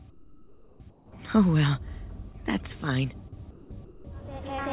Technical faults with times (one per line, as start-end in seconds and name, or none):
0.10-1.12 comfort noise in place of the background
2.32-2.35 short concealed packet loss
3.51-3.71 sound dropped by the voice detector
3.85-4.05 comfort noise in place of the background